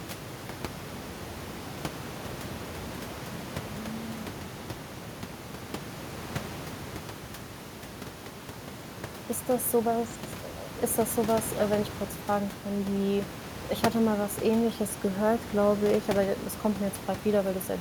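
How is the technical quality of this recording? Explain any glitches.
No glitches to report; the only thing beneath the speech is room noise from the recording space, at about 22 dB and about 14 dB below the speech.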